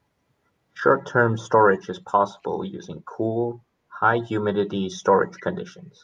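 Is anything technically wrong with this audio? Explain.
Yes. At 5.37 to 5.43 s a faint echo leak appears: a delayed copy of the speech returns about 260 ms late at a very low level, roughly 30 dB under the talker. The likely cause is a loudspeaker at the far end whose echo canceller let part of its microphone pickup through. On a spectrogram it shows as a weak, brief ghost of earlier harmonics.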